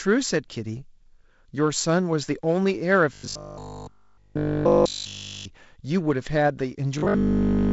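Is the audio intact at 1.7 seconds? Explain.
Yes, the audio is intact at 1.7 s: nothing there is broken or interrupted, and the G.722 wideband telephone coding passes that moment normally.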